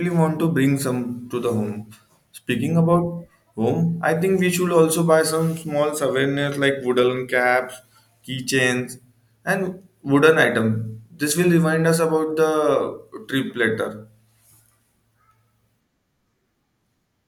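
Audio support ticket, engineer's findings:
Speech playback checked; no audible fault found.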